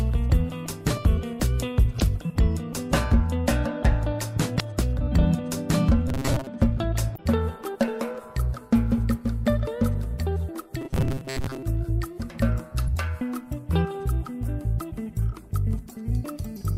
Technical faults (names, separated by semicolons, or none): damaged data in a compressed stream; robotic sound from repeated short buffers